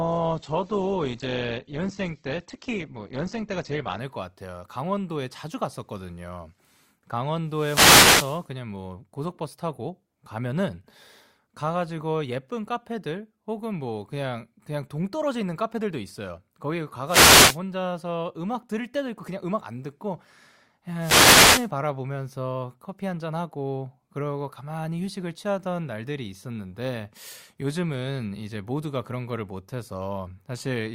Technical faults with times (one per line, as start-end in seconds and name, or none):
0.00-4.00 adaptive stream starting at a low bitrate
7.47-8.47 wireless microphone noise hit
17.06-17.59 wireless microphone noise hit
20.98-21.69 wireless microphone noise hit